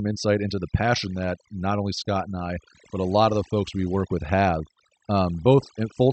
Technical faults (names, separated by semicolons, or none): overdone noise removal; clock drift between sender and receiver; repeated timing corrections